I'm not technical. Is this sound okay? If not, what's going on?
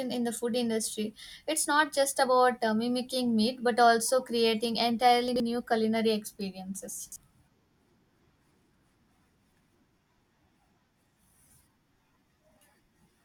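No. The speech has two brief jumbled moments, at 5.28 to 5.4 s and at 7.0 to 7.16 s. This is chunks out of order. The audio travels in short pieces, and one piece arrived late and played after pieces meant to follow it: two places late the first time, three the second. Nothing is lost, but the order is wrong, with sudden jumps between pieces. The garbled spans fit 40 ms pieces.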